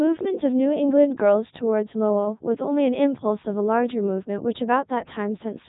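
A speech clip that has passed through the Codec 2 vocoder from start to finish. The waveform itself is gone. The decoder has rebuilt the voice from sine waves driven by pitch, voicing, energy and a spectral envelope. The result sounds robotic and buzzy throughout, and the damage is heavy. Nothing is present above 3.8 kHz. The quality points to the top 3.2 kbit/s mode, the richest setting this narrowband digital-radio codec offers.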